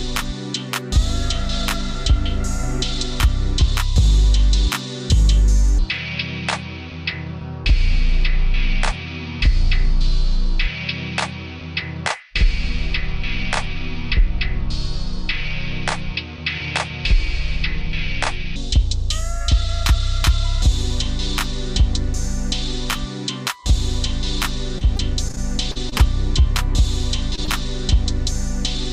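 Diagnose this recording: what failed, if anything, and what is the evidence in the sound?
The section from 5.79 to 18.56 s plays at the wrong speed, running at 0.647 times normal, so it sounds slowed and about seven semitones lower. Pitch and tempo drop together and recover at 18.56 s. The likely cause is playback or editing against a mismatched clock.

From 24.78 to 26.01 s there is repeated packet loss with a choppy, robotic texture. The network stage dropped or delayed audio again and again, in gaps up to 40 ms long. Concealment extended the preceding sound across about 169 ms in total, roughly 14 percent of that span.

Short concealed packet loss occurs twice, at 27.36 to 27.39 s and at 27.45 to 27.49 s, each covering about 20 ms of missing audio. The decoder bridged each hole by extrapolating the last sound before crossfading back, which leaves two brief smears in quick succession.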